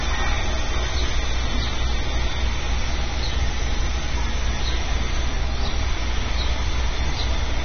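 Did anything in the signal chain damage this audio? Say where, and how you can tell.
Yes. AAC compression runs throughout: nothing reaches above 6.3 kHz, and sustained sound has a smeared, warbling texture. The damage is at the codec stage, likely low-bitrate AAC-LC, fitting roughly 24 kbps, where coarse quantisation and a lowered cut-off discard upper bands.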